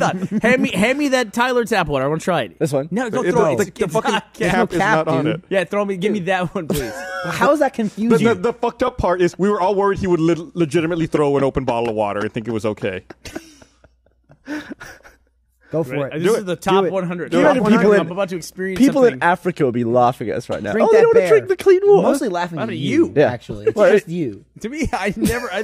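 No technical faults are audible.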